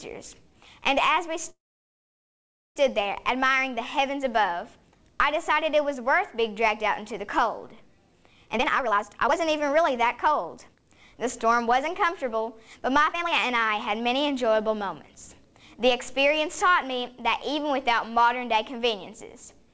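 Call audio freeze at 1.50 to 2.78 s: the sound stops for about 1.3 s, mostly silent, then resumes where it left off, likely because delayed packets left the jitter buffer empty. Jitter buffer speed-up from 8.45 to 14.83 s, and briefly from 15.45 to 15.75 s: the receiver trims short pitch-period pieces to clear the backlog, so the audio runs about 19% and then 13% faster at unchanged pitch, with roughly a second removed in total. The audio also passes through a G.722 call codec, which leaves nothing above 8 kHz.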